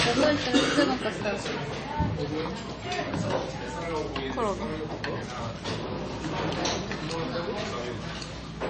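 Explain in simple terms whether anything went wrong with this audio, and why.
MP3 compression damage runs through the whole clip, from start to finish. Nothing is heard above about 8.3 kHz, so the top end sounds dull and cut off. The quieter details come across watery and swirly. The likely cause is an MP3 file saved with too little data. To fit, the encoder throws away the treble and drops faint parts of the sound, which then flicker in and out and cause that unsteady, bubbling quality.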